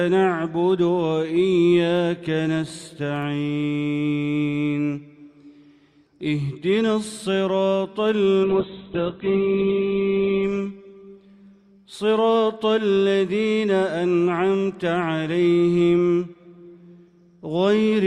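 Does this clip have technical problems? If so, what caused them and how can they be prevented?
Yes. A call bitrate drop runs from 8.45 to 12.29 s. The audio turns rough and muffled as its bandwidth shrinks from 20 kHz to 4 kHz, worst for about 1.5 s. That fits the encoder falling from around 48 to 7 kbps after the bandwidth estimate collapsed. A steadier network link and a sensible minimum encoder bitrate would prevent this.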